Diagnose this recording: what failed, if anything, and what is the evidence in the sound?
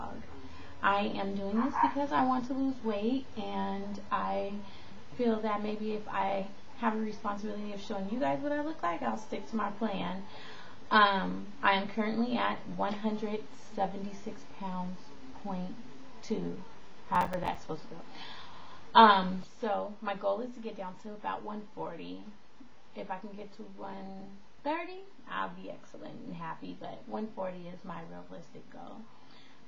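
The audio driver or buffer stage fell behind: the processor missed its deadlines repeatedly between 17.15 and 17.55 s. This is processor overload crackle. Buffers of around 5 ms went unfilled about ten times in that stretch, and each miss left a short hole of silence with hard edges. Packed together over those 0.4 seconds, the gaps are heard as a burst of crackle tearing through the sound, which stops once the load eases.

From 19.44 s to the end, the level drops abruptly by about 6 dB and stays there, with no other change in the sound. That step fits one channel dropping out somewhere in the two-channel path, likely a lost connection or a channel failing at the converter or playback stage. When both channels carry the same material, losing one halves the mono sum, which is exactly a 6 dB drop.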